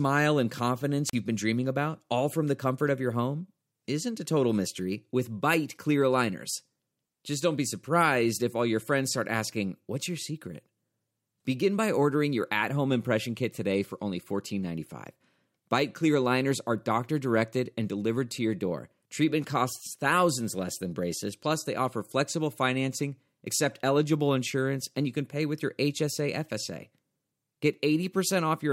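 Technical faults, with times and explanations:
1.07 to 1.15 s, wireless microphone squelch dropout. The radio signal from an analogue FM microphone fades. Hiss or static rises briefly. The receiver's squelch then mutes the output, leaving about 38 ms of near silence. Then the speech returns.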